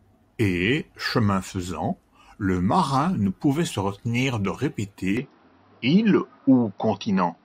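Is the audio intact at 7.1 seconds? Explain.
No. From 5.17 s to the end, the input has likely switched to a poorer device: nothing passes above 5.8 kHz, the level shifts by about 5 dB, and a new faint noise floor appears with no gap. A simple low-pass filter would change neither level nor noise.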